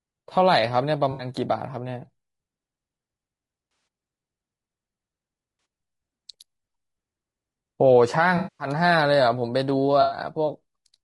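Throughout, the speech sounds rough and grainy, with noise between harmonics and a dulled top band, likely from low-delay AAC compression at a low bitrate, unlike isolated glitches. AAC frame loss with concealment leaves smeared, phasey patches rather than clean gaps at 1.11 s, 3.71 s (scattered over 0.16 s), 5.59 s, 8.37 s (0.22 s, the longest) and 10.01 s.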